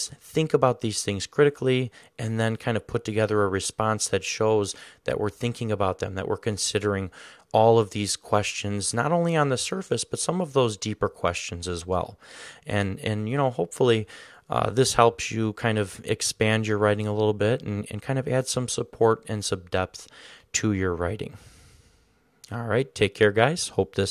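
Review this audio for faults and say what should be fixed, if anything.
Nothing here needs fixing; I didn't hear any technical faults anywhere in the recording, so it can stay as it is.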